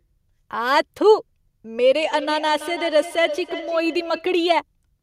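From 1.97 s to 4.42 s there is feedback echo between two devices. Two devices in the same room share one call. One plays back the other's microphone, and that microphone picks it up again. Each device's echo canceller only removes its own playback, so this loop goes unchecked. The speech returns at a fixed interval of roughly a third of a second, thinner in tone. The echo peaks about 14 dB below the speech.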